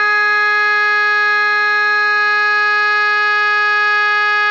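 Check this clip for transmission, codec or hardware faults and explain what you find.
There's one fault, and it runs through the whole music clip: aliasing. The material was dropped to a lower sample rate without a proper anti-alias filter first, which points to a rate around 12 kHz. Everything above the fold at 6 kHz bounced back down as spurious, unrelated tones, sitting maybe 20 dB under the music. You hear it as a gritty, metallic sheen on the bright stuff, and the top end stops abruptly at that 6 kHz edge.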